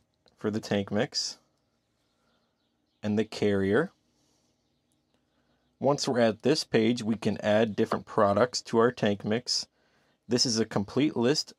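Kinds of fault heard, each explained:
Broken MP3 bit reservoir: 7.90 to 7.93 s, a glitch about one 26 ms frame long, likely a cut whose next frame decoded another frame's borrowed bytes.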